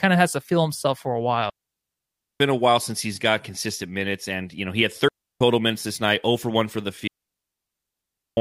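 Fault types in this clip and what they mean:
Digital wireless dropout: the receiver loses the link and mutes the speech. Three clean silent holes, about 0.9, 0.33 and 1.3 seconds, with no noise bursts.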